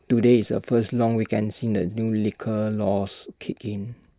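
No technical faults can be heard anywhere in the speech.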